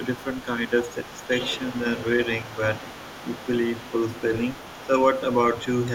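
Right from 0.03 s to 4.87 s there's the other side's voice leaking through underneath, sitting roughly 20 dB below the talker. That's likely an echo canceller letting some of the loudspeaker playback back into the mic. It returns, a bit fainter at about 25 dB down, from 5.12 s to 5.87 s.

Meanwhile there's speech suppressed in double talk: short dips of a few dB in the talker's voice at 0.17–0.26 s, 0.70–0.79 s and 4.87–4.93 s. Both sides likely overlap there, and the canceller ducks everything because it can't tell them apart.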